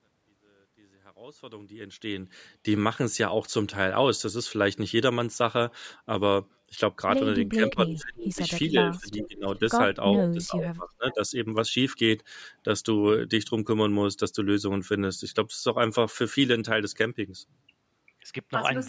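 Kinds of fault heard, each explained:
Speech suppressed in double talk: The level dips and breaks up at 7.55–8.42, 8.69–9.61 and 10.33–11.2 s, up to about 30 dB down. An echo canceller likely ducked both talkers at once.
Echo leak: Brief delayed copies of the speech surface at 7.68 and 9.19 s, about 410 ms late and about 10–20 dB below. Likely loudspeaker echo slipping past cancellation.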